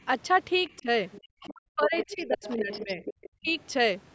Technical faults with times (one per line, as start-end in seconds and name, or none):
0.66-0.78 other side's voice leaking through
0.79-0.88 speech suppressed in double talk
1.12-1.49 other side's voice leaking through
1.46-3.03 speech suppressed in double talk
1.84-3.50 other side's voice leaking through
3.39-3.53 speech suppressed in double talk